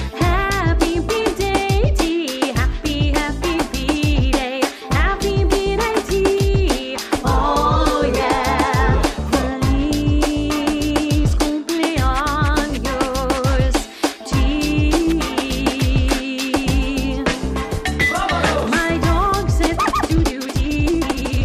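A time-stretched section runs from 19.64 s to the end at 21.44 s, where the audio is sped up by a factor of about 1.92 while its pitch stays put. The pace jumps abruptly at 19.64 s and the sound turns rushed. The likely cause is software squeezing this stretch to fit a shorter length, holding the pitch steady by cutting out short pieces and joining what remains.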